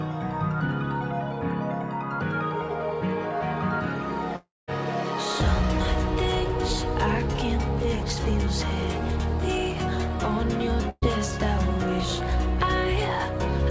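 From 4.36 to 4.70 s the last sound is held and faded over about 0.3 s, ending in about 190 ms of silence. This is likely a long network dropout, with about 320 ms lost. From 10.90 to 11.04 s, a burst of packet loss removes about 120 ms, concealed by a decaying fill that ends in brief silence before the audio resumes. Throughout, the band stops at 8 kHz, which fits a wideband call codec such as G.722.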